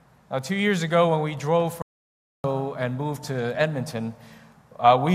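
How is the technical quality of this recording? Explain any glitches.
There's one clear glitch. At 1.82 s a playback stall cuts the sound dead for 0.62 s until 2.44 s, likely the player starving for data or its thread getting blocked, before it carries on.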